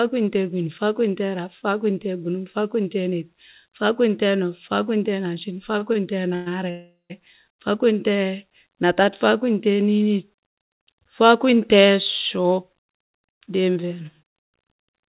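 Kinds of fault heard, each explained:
Short stall from a late packet: At 5.79 s and again at 5.93 s the speech hangs on a sound for a moment, by 24 ms and then 18 ms, with a faint buzz or dip. The receiver ran out of audio, stretched what it had until the packet turned up, then carried on from the same spot, so nothing is lost.
Call audio freeze: From 6.35 to 6.48 s the last sound is drawn out for 112 ms as a fading buzz or hiss. From 6.70 to 7.12 s it is drawn out for 397 ms, decaying into about 150 ms of silence before the speech resumes exactly where it left off. The likely cause is packets held up in transit, leaving the jitter buffer empty. It differs from a dropout because nothing is skipped. It differs from the short stalls because these holds are longer and fade out.
Jitter buffer speed-up: From 12.37 s to the end the speech runs about 7% fast while its pitch stays the same, giving a hurried delivery. 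The receiver had built up surplus delay after the earlier holds and shed roughly a fifth of a second by removing many tiny pitch-period slices in a row. A tape-style speed change would also raise the pitch. Here the pitch is unchanged, and only the timing tightens.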